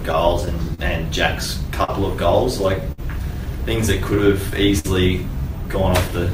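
Clock drift between sender and receiver runs through the whole clip. The sender's clock is about 4 percent slow, so the receiver's buffer keeps draining. It repeats small slices of sound to cover the shortfall. Small timing hiccups recur at uneven intervals.

From 0.12 to 3.0 s come scattered short gaps. Around five late or lost packets leave small holes, the longest roughly 50 ms. Each is filled by extending the preceding sound. Brief smears and ticks result, with nothing actually missing.

At 4.79 to 4.86 s there is a short stall from a late packet. The buffer ran empty, and the last sound was held for 52 ms until the packet arrived. Playback then resumed in place. The held sound has a slight buzz or dip.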